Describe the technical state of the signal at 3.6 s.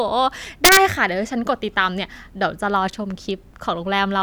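At 3.6 s the speech signal is intact, with no audible fault at that moment.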